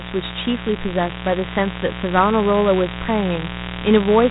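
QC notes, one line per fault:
throughout, mains buzz: there's a steady, raspy 60 Hz buzz sitting fairly high, not far under the speech. It isn't a clean hum. It has that gritty edge because sharp switching spikes, from something like a dimmer, a rectifier or a missing shield, are getting in twice per mains cycle. Those spikes pile up harmonics of 60 Hz that climb well into the kilohertz range, so the buzz is heard right across the band.
throughout, Dialogic VOX ADPCM: the speech has the boxed-in, gritty sound of phone-menu or voicemail audio. Nothing comes through above about 3.8 kHz, so the top end is gone. A rough hiss rides along with the speech and drops away when it stops. That fits 4-bit ADPCM at 8,000 samples a second, around 32 kbps. Each sample only stores a coarse step from the last, and that error tracks the signal, so it's clearly audible.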